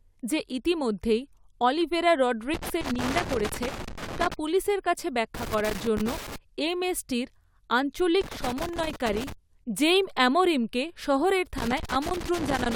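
A worn or dirty contact somewhere in the signal chain of this speech clip is making and breaking as it shifts, producing loose connector crackle: the audio is chopped into irregular bursts of crackle and scratching. It appears from 2.54 to 4.34 s, right after "যে ইতিমধ্যেই অলিভেরা"; from 5.35 to 6.36 s, just after "পুলিশের কাছে"; from 8.21 to 9.32 s, just before "জেইম অ্যামোরিমকে শহরের"; and from 11.58 s to the end.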